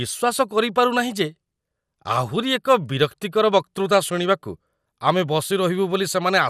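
A speech clip that sounds dull and muffled throughout, with a gurgling, granular roughness clinging to the sound and upper frequencies flickering in and out. This is likely MP2 compression at a low bitrate, around 80 kbps, where too few bits force whole upper sub-bands off and leave the rest coarsely quantised.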